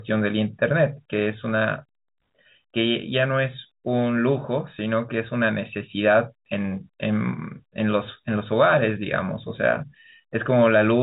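Nothing goes wrong anywhere in this speech; it just has the narrow sound of G.711 telephone coding, with nothing above about 4 kHz getting through.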